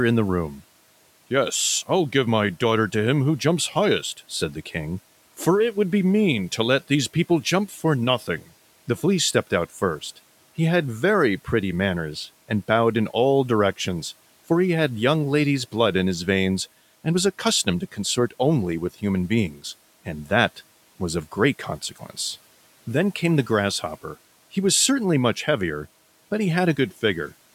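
At 19.51 s, just after "only with human" and before "and that was of", there is speech cut by the noise suppressor. It lasts until 19.62 s, about a tenth of a second. The suppressor mistook a soft stretch of speech for noise and pulled it down with the background, by about 11 dB at its deepest. The sound there seems swallowed and faint. The room noise, about 28 dB below the speech, is part of the recording.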